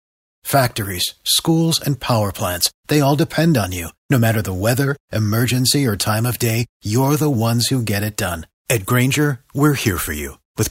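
Nothing stood out on listening to this speech recording; its opening fades in smoothly over roughly the first half second.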